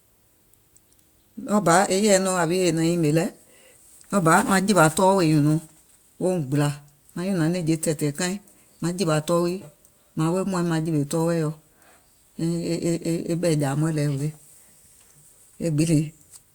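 Compressed frames skipped at 1.88 to 1.91 s: about 40 ms of speech, a single 42.7 ms frame, never plays, so the audio jumps ahead.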